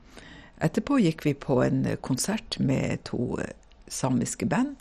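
From start to finish the speech is dull and muffled, with nothing above 12.8 kHz and a gurgling, granular roughness running through it. This is heavy MP2 compression, likely at a low rate near 56 kbps. MPEG Layer II divides the spectrum into 32 sub-bands and shares out bits among them. Short of bits, it shuts off the upper bands entirely and quantises the rest coarsely, so bands flicker in and out and leave that watery grit.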